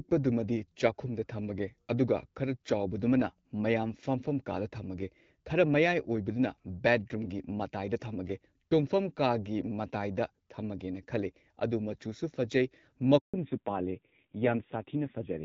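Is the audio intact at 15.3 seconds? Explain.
No. A fallback to narrowband begins at 13.34 s and runs through 15.3 s to the end of the clip. The call leaves HD Voice, whose wideband coding was carrying content up to about 7 kHz at light codec damage, and drops to an older narrowband codec. The abrupt loss of everything above 4 kHz and the added roughness point to a low-rate AMR narrowband mode around 5.9 kbit/s. The speech sounds muffled, duller and grainier.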